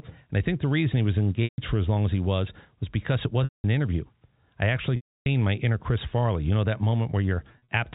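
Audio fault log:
1.44–1.58 s, 3.44–3.64 s, 4.96–5.26 s, 7.52–7.68 s: packet loss with pitch repetition. The receiver fills each gap by looping the last pitch period and fading it over about 50 ms. The 140, 200 and 300 ms losses become a brief buzzy hold that fades to silence, then a short cross-fade back, which fits 20 ms packets. The final loss is scattered, with runs up to 40 ms, and gives only brief held buzzes. On a spectrogram, frozen harmonic stripes taper into a blank gap. On the waveform, identical repeated cycles shrink to a flat line.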